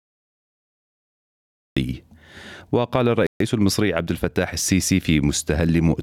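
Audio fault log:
0.00–1.77 s, cut-off start: the recording began late, so the clip opens on digital silence until 1.77 s, where sound jumps in mid-event with no attack or fade-in, as if the capture caught it already underway rather than at its natural onset.
3.27–3.41 s, Bluetooth stall: likely radio interference delayed packets until the headphones' buffer emptied, so playback drops to silence for 136 ms, then resumes once the retransmitted audio arrives, leaving an abrupt gap in the sound.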